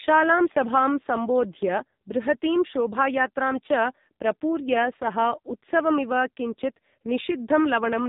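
AMR narrowband mobile codec damage runs through the whole clip. The speech has passed through the AMR-NB phone codec, which samples at 8 kHz, so nothing above 4 kHz survives and the sound is dull and boxed-in. The codec rebuilds the voice from a vocal-tract model excited by a few pulses per short subframe, and here the damage is heavy, which fits a low mode around 5.9 kbps. The result is buzzy, synthetic-sounding speech.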